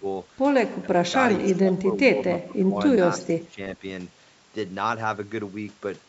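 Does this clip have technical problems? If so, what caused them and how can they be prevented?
Yes. Speech suppressed in double talk occurs at 0 to 0.05 s, 0.81 to 1.13 s, 1.4 to 2.19 s, 2.4 to 2.77 s, 3.14 to 3.6 s and 3.77 to 3.84 s, where the speech dips by roughly 10 to 20 dB or breaks up. The likely cause is an echo canceller that could not tell this talker from loudspeaker echo while both sides spoke, so it attenuated everything. Using a headset, or an echo canceller with better double-talk detection, would prevent it.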